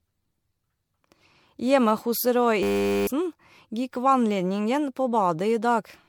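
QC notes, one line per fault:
Throughout, generation loss: the audio was likely decoded and re-encoded around seven times with a lossy codec, each pass quantising on a shifted frame grid. The damage accumulates into swirly, hollow, smeared speech with blurred attacks, fitting repeated MP3 at 96 kbit/s, with nothing above 19.9 kHz.
2.63–3.07 s, system hang loop: the system froze while the sound hardware kept replaying one 10 ms piece of its buffer dozens of times. The exact repetition fuses into a steady 100 Hz buzz, and about 0.4 s of speech is lost.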